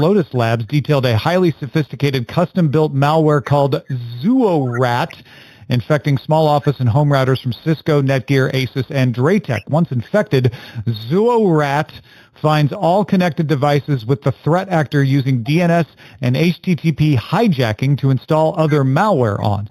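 Throughout the clip, imaging from linear upsampling is present: the audio was raised from an 8 kHz rate to 48 kHz by joining successive samples with straight lines, a poor interpolation filter. It softens the top of the original band and leaves a mirrored copy of the spectrum between 4 and 8 kHz, roughly 25 dB below the signal, so the dull, band-limited sound carries a faint metallic shimmer above its natural ceiling.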